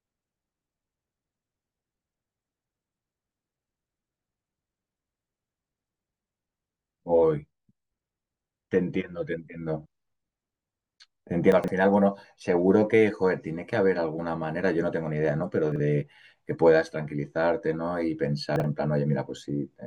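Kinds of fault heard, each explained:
Chunks out of order: 40 ms blocks of the speech were delivered or written late, so each plays after the blocks meant to follow it. Nothing is missing, but near 11.5 s (three blocks late), 15.7 s and 18.6 s the sound briefly jumbles at the hard joins.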